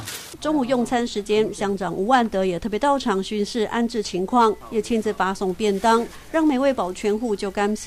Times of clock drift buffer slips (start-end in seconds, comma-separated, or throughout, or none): none